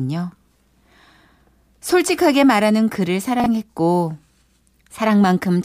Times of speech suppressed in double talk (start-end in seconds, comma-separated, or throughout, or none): none